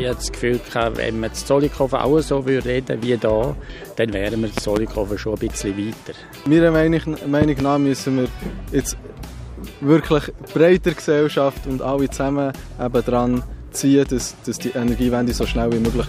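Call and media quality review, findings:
Loud pop, 4.58–4.79 s: double pop, about 15 dB above program, sound continues underneath. Likely a voltage step from plug, switch, static or driver glitch, shaped downstream. Not a dropout: no gap in the audio.

Loud pop, 7.42–7.63 s: same double pop, about 15 dB up. Likely the same electrical transient, unlike a sharp single-sample digital click.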